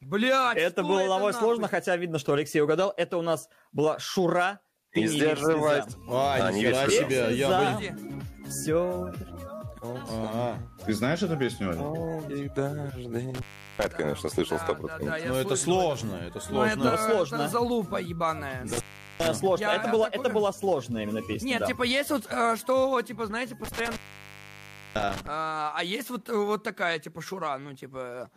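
The sound drops out abruptly with crackle at each edge at 13.35 to 13.87 s, 18.73 to 19.27 s, and 23.64 to 25.28 s, the line staying open about 0.38 s, 0.40 s and 0.99 s. This is intermittent contact, where a loose plug or cable briefly breaks the signal path.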